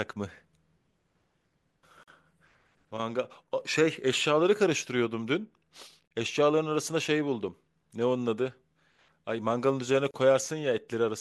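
A gap at a join of encoded pieces opens in the speech three times, at 2.03 to 2.08 s (about 42 ms), 6.08 to 6.11 s (32 ms) and 10.11 to 10.14 s (32 ms), spaced 4 s apart. The audio was encoded in separate segments and spliced untrimmed, so each encoder's start-up delay and padded final frame remain as brief silence. Each dropout has smeared edges, and the speech then resumes where it stopped.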